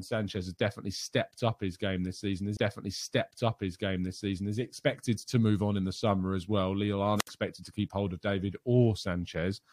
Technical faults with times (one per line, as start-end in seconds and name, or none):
2.56-4.55 stream segment repeated
7.16-7.30 wireless microphone squelch dropout